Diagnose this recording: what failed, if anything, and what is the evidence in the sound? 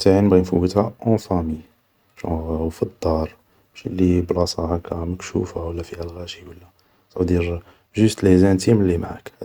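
Nothing in the speech recording points to a failure at any stage between capture and playback. No audible event marks a point where the signal chain broke down.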